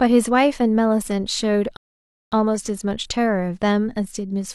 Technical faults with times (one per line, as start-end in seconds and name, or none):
1.77-2.32 rebuffering stall